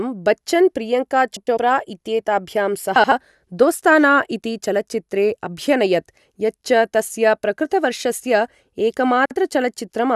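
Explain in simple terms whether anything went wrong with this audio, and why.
Three brief garbled flutters come from frames out of order. Two neighbouring chunks of sound swapped places. They occur at 1.37 to 1.58 s, just after "बच्चन् प्रियङ्का", at 2.96 to 3.12 s, and at 9.26 to 9.36 s. No sound is lost.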